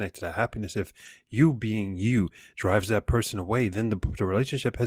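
A lost packet, rebuilt from error correction, appears at 1.05 s after "to that happiness if" and another at 2.77–2.79 s before "that person away": a low-bitrate backup copy fills each gap, sounding briefly rougher and noisier.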